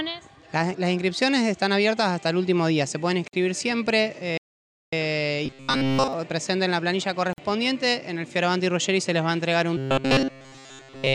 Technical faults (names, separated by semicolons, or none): gap at a join of encoded pieces; playback stall; robotic sound from repeated short buffers